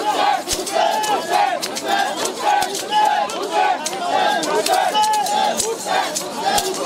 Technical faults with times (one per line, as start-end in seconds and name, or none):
none